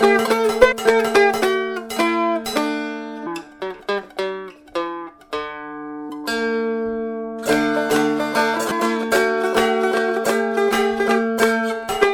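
At 0.71, 3.25, 6.09 and 8.70 s the audio jumps forward because compressed frames are skipped: whole coded blocks never reach playback, so a stretch of roughly a third of a second, then about 0.7 s, about 0.2 s and again about 0.7 s simply vanishes. The frames are 24 ms long. On a spectrogram the texture shifts abruptly, and the waveform envelope steps discontinuously.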